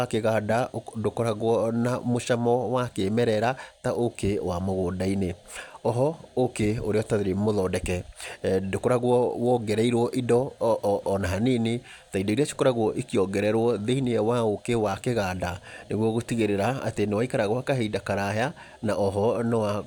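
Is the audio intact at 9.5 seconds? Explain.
Yes, at 9.5 seconds the speech plays through cleanly, with no dropout, glitch or other fault to be heard at that moment.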